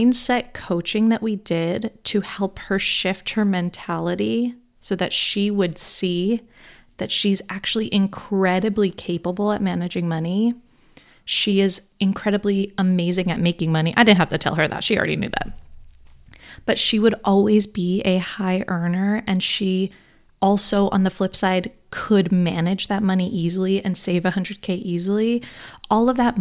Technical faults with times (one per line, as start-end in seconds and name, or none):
none